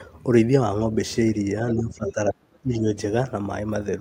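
From 1.75 to 2.85 s, the speech is suppressed in double talk. The level sinks sharply, by about 30 dB at its deepest. The dip lasts about a second. An echo canceller likely mistook the talker for loudspeaker echo while both sides spoke. It turned both down.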